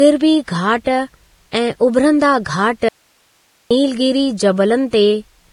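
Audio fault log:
Throughout: Vorbis compression, likely at a low bitrate near 29 kbps. Nothing survives above 10.6 kHz, and the remaining treble is quantised so coarsely that its detail turns into grainy hiss of similar energy, roughening the speech and blurring consonant onsets.
1.51 s, 2.44 s, 4.90 s: pre-echo. Each sharp attack is preceded by a brief burst of hiss, lasting 20 ms, 17 ms and 27 ms respectively. The coder spread quantisation noise across the whole transform block, so noise sized for the loud onset leaks into the silence before it.
2.89 to 3.71 s: audio dropout to a faint residue. The speech cuts out abruptly for 0.82 s and returns just as suddenly. Only hiss remains in the gap, roughly 40 dB below the speech, which points to the signal likely being lost upstream while the later path stayed live.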